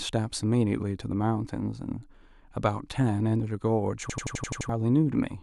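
At 4.10 s the speech hits a system hang loop running to 4.69 s. The machine stalled while the hardware kept replaying one 85 ms slice, which fits a 4096-sample buffer. It repeats at 11.7 Hz as a machine-gun stutter, costing around 0.7 s of audio.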